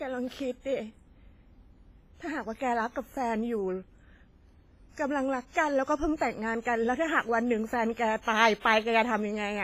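A speech clip with heavy, washy coding damage throughout: ringing, a hiss that breathes with the voice, and nothing above 15.5 kHz, which points to a low bitrate of about 24 kbps, likely WMA compression. A spectrogram shows a hard ceiling and blotchy, holed mid-band energy. Pre-echo smears three attacks, with hiss arriving early at 6.17 s (41 ms), 8.22 s (58 ms) and 8.60 s (52 ms). In the waveform each appears as a noise ramp before the onset, and the spectrogram shows a broadband haze reaching back ahead of it.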